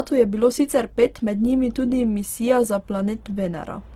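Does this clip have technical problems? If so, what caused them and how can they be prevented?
Yes. The whole speech clip sounds like low-bitrate audio saved at a high bitrate. Its coarse texture fits a 16 kbit/s Opus source, likely re-encoded as 320 kbit/s MP3. To prevent this, export from the original recording instead of re-encoding a compressed copy.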